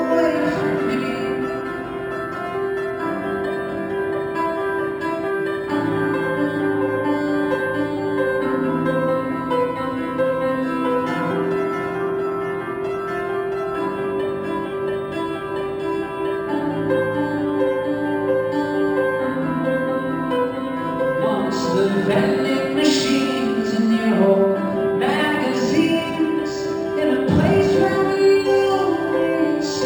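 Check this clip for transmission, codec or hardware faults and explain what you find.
One fault runs through the whole clip: imaging from linear upsampling. The audio appears to have been carried at 12 kHz and raised to 48 kHz by straight-line interpolation between samples, a poor reconstruction filter. The top of the band just below about 6 kHz is dulled, and a mirrored copy of the spectrum folds into the 6 to 12 kHz region, roughly 30 dB below the signal. That leftover image adds a faint metallic shimmer to sibilant and bright high-frequency sounds.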